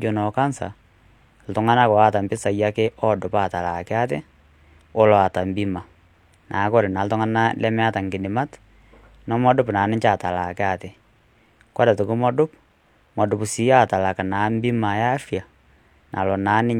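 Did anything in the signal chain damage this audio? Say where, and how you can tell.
No, nothing in the chain audibly damaged this speech recording at any stage.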